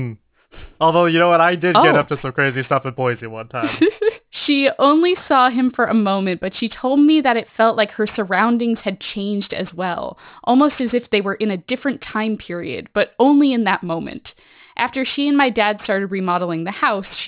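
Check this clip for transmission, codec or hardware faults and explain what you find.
One fault runs through the whole clip: aliasing. From start to finish the sibilants sound gritty and metallic, with hiss-like energy landing at pitches that don't belong to the speech, and the spectrum stays full right up to a hard edge at 4 kHz. The audio was resampled down without an anti-aliasing filter, which fits a drop from 44.1 kHz to 8 kHz. Everything above 4 kHz folded back below it, sitting roughly 20 dB under the speech.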